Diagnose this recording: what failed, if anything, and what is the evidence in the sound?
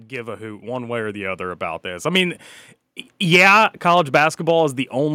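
The call processing's automatic gain control judged the input too quiet and raised its gain gradually, producing automatic gain rising from 0.07 s to 2.48 s. The speech and the background noise swell together by about 11 dB, a slow ramp rather than a step.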